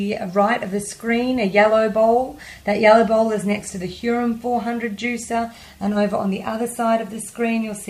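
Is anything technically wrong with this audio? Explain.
Yes: the resampler restarted on every block throughout, converting 44.1 to 48 kHz in isolated 20 ms chunks, so each seam errs, giving a faint 50 Hz buzz under the sound.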